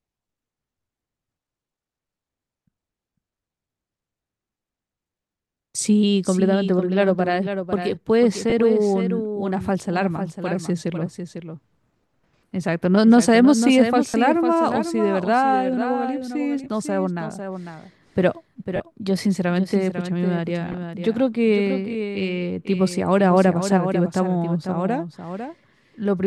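A second copy of the speech is mixed in throughout, most likely because the signal was captured again over a slower path or an edit left two copies out of step. That doubled audio track trails the original by about half a second at roughly 10 dB lower, so every phrase is shadowed by a clean, dry repeat with no room colour. A Bluetooth LE Audio link dropped frames six times, and each time the LC3 decoder filled the gap by reusing the last spectrum with scrambled phases, smearing the voice into a brief noisy blur. This happens at 8.50 to 8.52 s for about 20 ms, 14.09 to 14.14 s for about 50 ms, 16.64 to 16.67 s for about 20 ms, 18.76 to 18.80 s for about 40 ms, 20.72 to 20.74 s for about 20 ms, and 25.86 to 25.88 s for about 20 ms. The 20 ms gaps fit two 10 ms frames, and the longer ones fit four or five. Between 22.42 and 22.91 s, a CD scratch destroyed more data than the error correction could rebuild on successive turns of the disc. 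The player patched over the damage, leaving three CD scratch ticks, each only a fraction of a millisecond long.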